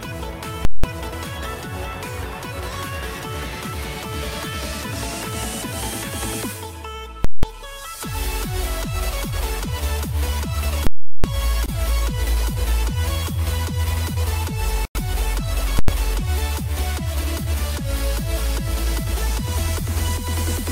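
A calculation in the processing chain produced infinite or invalid numbers, which were pinned to full scale, so the output sits flat at one extreme value, far beyond the audio's peaks, for a whole block: invalid numbers at full scale. It occurs at 0.65–0.84 s and 7.25–7.43 s (about 186 ms each), 10.87–11.24 s (about 372 ms) and 15.79–15.88 s (about 93 ms). The lengths fit 8192-, 16384- and 4096-sample blocks. Each is heard as a violent pop in and out with silence between.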